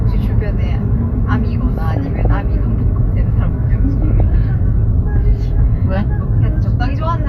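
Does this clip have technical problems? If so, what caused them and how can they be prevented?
Yes. Throughout, the sound is dull and plainly gurgling, with a grainy edge and upper frequencies that seem to flicker in and out. This is likely MP2 compression: MPEG Layer II gives each of its 32 sub-bands a share of the bits, and at a rate that fits around 80 kbps the top bands are dropped while the rest are coarsely quantised. Encoding at a higher bitrate, or with a more efficient codec, would prevent it.

From 1.78 to 2.30 s, 4.02 to 4.20 s and 7.03 to 7.06 s, short blips of noise break into the sound, strongest in the first stretch. This is DAB burbling. Bit errors from weak reception got past error correction and corrupted samples, putting short blips of noise into single sub-bands. The first burst fits an error rate of about half a percent, the later two a few tenths of a percent. A better antenna, a stronger signal or a more robust protection level would prevent it.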